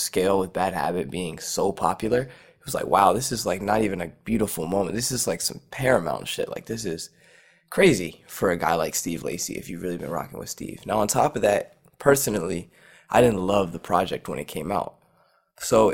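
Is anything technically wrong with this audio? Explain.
Yes. Throughout the speech there is a metallic buzz with extra tones riding on every syllable, with the level pumping up and down by about 6 dB roughly 150 times a second. This is overlap-add ripple: the audio was split into windowed frames and rebuilt with an overlap whose windows don't sum to a constant gain, so loudness dips and swells once per frame, and that frame rate is heard as the buzz.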